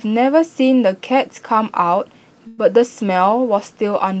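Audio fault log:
2.47–2.60 s, call audio freeze: For about 0.13 s the speech stops moving forward and the last sound is stretched into a short buzzy tail instead of dropping to silence. This is likely a jitter buffer running dry while packets were held up, with the receiver filling the wait from what it last had. When delivery resumed, the speech carried on from where it stopped, so nothing is lost, but everything after this point plays about 0.1 s later.
3.13 s to the end, call bitrate drop: From here the speech turns rougher and more watery. The Opus encoder was told to drop from 32 to 17 kbps, roughly half its bit budget, after the call's bandwidth estimate fell. With fewer bits per frame, the encoder codes the spectrum less finely, which is what produces this grainy, smeared quality. The rate stays low for the remaining 1.08 s and does not recover before the clip ends.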